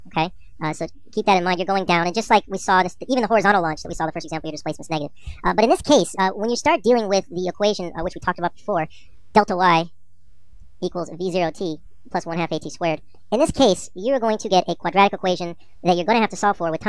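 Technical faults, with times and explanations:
Throughout, wrong sample rate: everything runs half again too fast and sits about 7 semitones (a fifth) too high, with speed and pitch shifted together by the same 1.5 ratio. Because timing and pitch move in lockstep rather than independently, the samples are being clocked out faster than they were captured, with no conversion between the two rates, which fits material recorded at 16 kHz being played back at 24 kHz.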